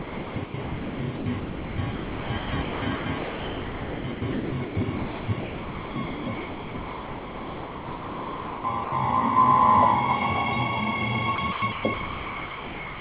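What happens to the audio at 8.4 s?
At 8.4 s the audio is still inside a stretch of sound chopped by the voice detector, running from 0.0 to 8.92 s. The likely cause is a sender-side detector repeatedly switching transmission off and on. Each time it cut out, the gaps were filled with synthetic comfort noise, about 6.9 s in total. The sound comes and goes in choppy fragments, all band-limited below 4 kHz by the call codec.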